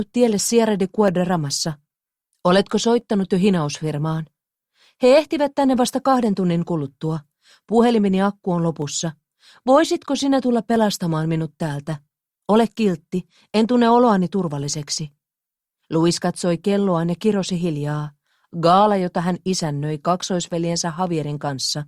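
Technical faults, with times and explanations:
1.08 to 20.44 s, clock drift buffer slips: around ten short clicks recur every 1.94 s under the signal. This is likely two devices on independent clocks, drifting apart by roughly 200 ppm, so the buffer periodically drops or repeats a small block, which fits slips of around 15 samples.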